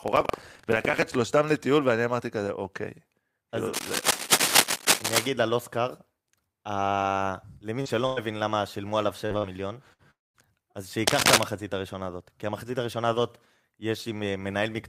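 Buffer tearing runs from 0.00 to 1.05 s. The writing program and the playback hardware have drifted so that they cross inside every period, leaving a small slice of each buffer holding audio about 150 ms old. The hard joins produce a steady robotic buzz at 23.4 Hz, which fits a 2048-sample buffer.

Cable scratch noise appears from 3.73 to 5.27 s as dense, uneven rustling about 5 dB above the speech. It is likely a worn cable, connector or control being moved, so that its contact resistance flickers rapidly.

Short concealed packet loss occurs from 7.81 to 7.96 s. About 40 ms never arrived, and the decoder extended the preceding sound before blending back into the real speech. This leaves a brief smear with a slight timing stretch.

A lost packet rebuilt from error correction sits inside that stretch, at 7.85 to 7.87 s, and another at 8.17 to 8.18 s. Each 20 ms frame was played from the low-bitrate copy carried in the next packet, so there is no gap, but both sound rougher and noisier.

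A burst of packet loss follows from 8.06 to 8.19 s. About 100 ms of speech is missing. The receiver carried the last sound forward and faded it over the hole, producing a held buzz or hiss before the speech picks up further along.

Repeated packet loss (robotic sound) covers 9.26 to 10.02 s. There are three gaps totalling 140 ms, the longest 58 ms, each patched by continuing the previous sound. Together they give a choppy, robotic texture with fragments of speech missing.

A long network dropout runs from 10.11 to 10.37 s, where about 240 ms never played. A brief fading continuation gives way to roughly 190 ms of silence, likely because no audio reached the receiver at all. The speech then resumes past the lost portion.

Cable scratch noise returns from 11.07 to 11.44 s, with the same uneven scratching about 5 dB over the speech.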